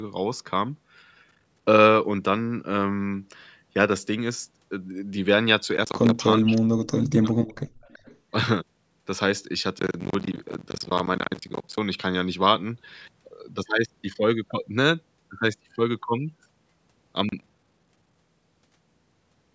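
Processor overload crackle first appears from 1.31 to 1.65 s and again from 5.77 to 6.17 s. The processor is failing to finish its audio buffers on time, and each missed deadline drops in a short slice of silence with hard edges. The gaps are spaced in a way that fits buffers of around 10 ms, and run together into a gritty, tearing crackle over the sound that stops once the load eases.

From 6.38 to 7.38 s the speech dips sharply, falling by roughly 35 dB at its deepest, with most of that second affected. This is most likely speech suppressed in double talk: with both sides active, the echo canceller could not tell this talker apart from loudspeaker echo and turned everything down.

Inside and just after that stretch, faint delayed copies of the sound come through, trailing the original by 380 ms: a brief scrap at 6.57 to 6.62 s, around 25 dB below the speech, another at 7.48 to 7.54 s, around 35 dB down, and a longer one from 7.81 to 8.17 s, around 30 dB down. 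The likely cause is echo leak, where the far end's canceller let part of its loudspeaker pickup through and sent it back.

Between 7.68 and 7.81 s the background room sound drops by about 16 dB for roughly 150 ms, then recovers. This is background gated by the echo canceller, which clamped the microphone hard while the loudspeaker was playing and released it shortly after.

Processor overload crackle returns at its longest from 9.79 to 11.78 s, nearly two seconds of tearing, and once more from 17.29 to 18.16 s. Both have the same character of dense, hard-edged dropouts to silence, each roughly 10 ms long.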